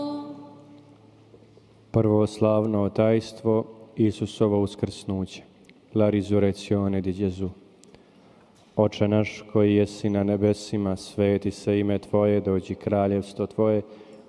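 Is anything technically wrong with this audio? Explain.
No, no technical faults detected.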